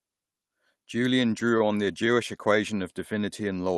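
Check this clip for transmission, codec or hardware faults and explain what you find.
There is one transmission fault, a burst of stutter in the middle of the clip.

Repeated stalls (stutter), 1.31 to 2.18 s: packets reached the receiver late, so its jitter buffer kept emptying, and about ten brief waits, none longer than roughly 18 ms, were bridged by extending the preceding sound. Nothing is lost, but the speech drags and hiccups.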